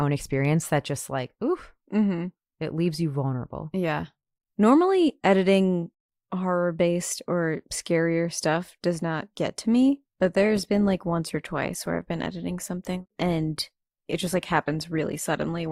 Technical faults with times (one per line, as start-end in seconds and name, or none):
9.88-15.71 adaptive stream at a lower bitrate